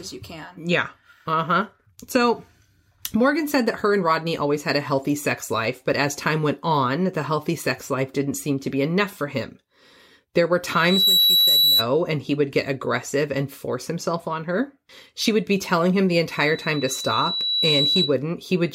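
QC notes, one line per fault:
10.69–11.87 s and 16.30–18.16 s: loudspeaker feedback squeal. A steady 3.9 kHz tone swells over the speech and ends up slightly louder than it. The first builds in under half a second, the second over about a second and a half. The microphone is picking up its own loudspeaker, and at that frequency the loop gain exceeds one.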